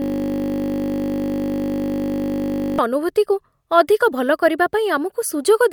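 A system hang loop is already under way when the clip begins and runs until 2.79 s. The computer or its audio driver stalled while the sound hardware kept replaying its ring buffer, so one 20 ms slice of the speech repeats exactly, more than a hundred times over. Because the slice is so short, the repetitions fuse into a steady buzz at 50 Hz, which fits a 20 ms buffer.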